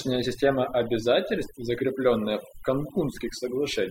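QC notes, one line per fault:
Throughout: overdone noise removal. A noise reduction stage was set too aggressively, cutting individual frequency bands down or out whenever they sat near its noise estimate, taking quieter parts of the speech with them, so the background in pauses drops and breaks up into twinkling specks.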